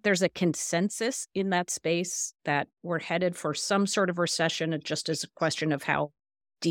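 No technical faults turn up anywhere in the speech recording. There is nothing to place on a timeline and nothing to explain.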